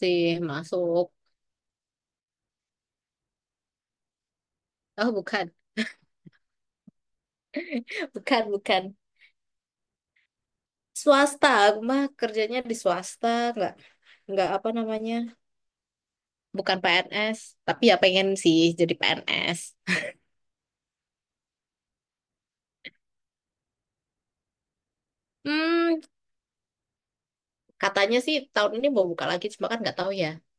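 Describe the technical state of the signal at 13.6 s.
At 13.6 s the speech signal is intact, with no audible technical fault at that moment.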